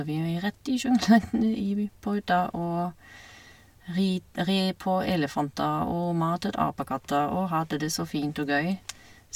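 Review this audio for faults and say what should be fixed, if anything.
Nothing in this speech recording needs fixing. No faults can be heard anywhere in it, so there is nothing to prevent.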